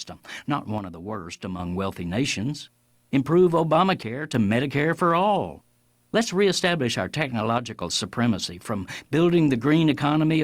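Speech clip with three abrupt drops of about 6 dB at 0.78–1.59 s (ending before "wealthy nations"), 4.03–4.35 s and 7.58–7.81 s (between "reestablish our" and "supremacy from"), likely one channel dropping out before the mono sum.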